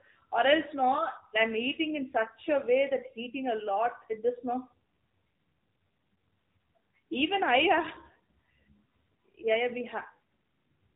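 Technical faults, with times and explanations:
Throughout: AMR narrowband mobile codec. The speech has that unmistakable phone-call quality: everything above 4 kHz is simply gone, so sibilants go dull and the whole thing sounds boxed-in. The codec rebuilds the voice from a vocal-tract model fed by a handful of pulses every 5 ms, and at this low rate it clearly shows, with a buzzy, synthetic edge on the voice, which fits AMR-NB running in its 7.4 kbps mode.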